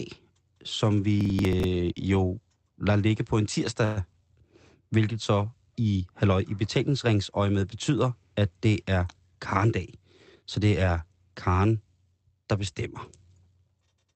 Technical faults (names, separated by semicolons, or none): processor overload crackle; call audio freeze; jitter buffer speed-up